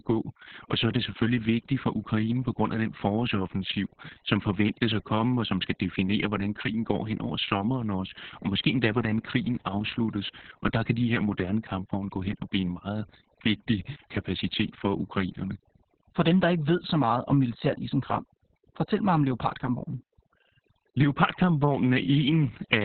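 From start to finish the background sits in near silence, broken by faint twinkling specks. This is overdone noise removal: a noise reduction stage set far too aggressively. Any narrow frequency band that drops close to its idea of the noise floor gets pulled down or switched off, so the leftover noise flickers as isolated specks and the softer parts of the speech are stripped away along with it.

Also present for the whole clip, the speech is muffled, hoarse and faintly robotic, with nothing above about 4.4 kHz. That is Opus voice compression running in its SILK linear-prediction mode at narrowband. The hard ceiling and the heavy, coarse rendering of the voice's excitation point to a very low bitrate, which fits something around 6 kbps. At that rate the encoder gives up the upper band entirely and approximates the voice roughly, which produces the dull, buzzy character heard throughout.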